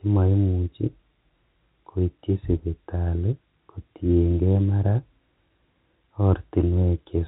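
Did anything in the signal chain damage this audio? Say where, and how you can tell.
No, nothing in the signal chain stood out as damaging on listening, with the speech carried over a telephone-grade G.711 A-law path whose narrow band is audible as expected.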